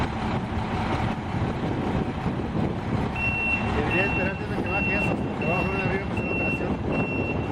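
Imaging from linear upsampling runs through the whole clip. The rate was raised by joining neighbouring samples with straight lines, which points to a doubling from 24 kHz to 48 kHz. Straight-line interpolation filters poorly, so the top of the original band is softened and a mirrored copy of the spectrum remains between 12 kHz and 24 kHz, roughly 35 dB below the signal. It is heard as a faint metallic shimmer on the brightest parts of the sound.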